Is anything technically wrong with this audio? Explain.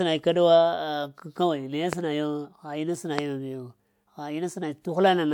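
Yes. The speech carries two loud pops, one from 1.93 to 1.95 s and another from 3.19 to 3.21 s. Each is a single sharp transient, roughly 15 dB and 20 dB above the speech level respectively, with the speech continuing underneath. The likely cause is a sudden voltage step or pulse entering the signal path, such as from a plug, a switch, static discharge or a driver glitch, which the downstream circuitry then shapes into an audible pop.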